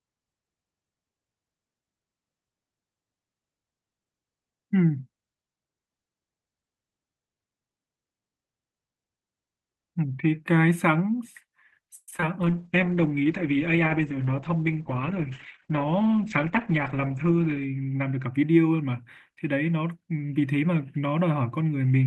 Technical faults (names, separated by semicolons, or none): repeated packet loss (robotic sound); call bitrate drop; jitter buffer speed-up